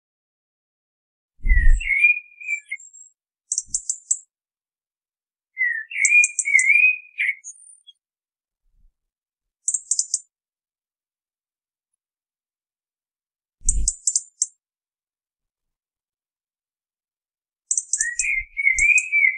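Nothing technically wrong can be heard in this recording of sounds. It opens with a smooth fade-in that begins at around 1 s and reaches full level by 1.29 s, with no click or hard edge.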